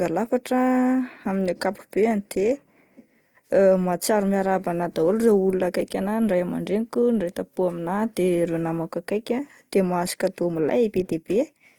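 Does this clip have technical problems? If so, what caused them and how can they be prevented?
Yes. The speech carries plainly audible Opus compression from start to finish, most likely from a low-rate encode, with the grain fitting something around 24 kbps in the codec's music (CELT) mode. The top end isn't lopped off, since there's content up to about 20.2 kHz, but the encoder keeps band energies and fills starved bands with folded or noise-like content, so tones come out rough and grainy. To prevent it, encode at a higher bitrate or keep a lossless master.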